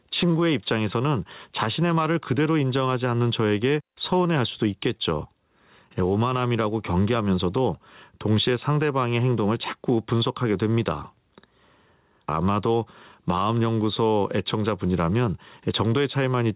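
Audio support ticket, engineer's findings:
Gain pumping, throughout. Level ducks around 10 dB under each loud syllable; likely input gain set far too high, with a fast limiter clamping every peak. Band-limited at 4 kHz, consistent with a G.711 call leg.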